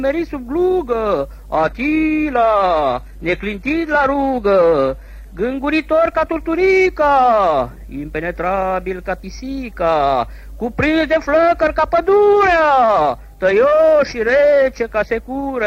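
From 1.57 to 5.57 s the adaptive stream drops to a lower bitrate. It switches abruptly with no gap, codec artefacts rise and nothing survives above 14.9 kHz.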